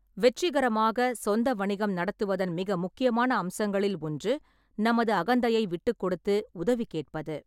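No technical faults turn up anywhere in this speech recording. No working path is listed to comment on, so nothing further can be singled out.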